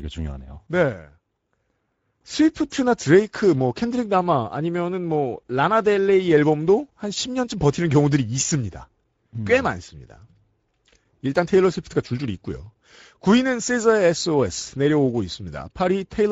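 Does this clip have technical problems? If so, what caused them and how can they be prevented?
Yes. Speex codec damage throughout: too few bits for the excitation make the speech hoarse and noisy, fitting about 16.8 kbps. A spectrogram shows grainy, smeared harmonics. Prevent it by using a higher-quality setting or a modern codec such as Opus.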